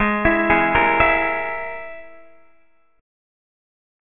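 Aliasing runs throughout. The audio was dropped to what fits a 6 kHz rate without filtering first, so content above 3 kHz folds back as gritty, metallic tones nearly as loud as the real sound. A spectrogram shows energy packed hard against 3 kHz.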